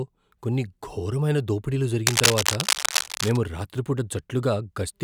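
A speech recording carrying cable scratch noise from 2.07 to 3.37 s: a dense, irregular rustling and scratching, roughly as loud as the speech itself, laid over the sound for just over a second. The likely cause is a worn cable or connector being moved so its contact resistance fluctuates rapidly. Unlike handling noise, which is mostly low thumps, or isolated digital clicks, this is a bursty, gritty broadband texture that stops once the movement ends.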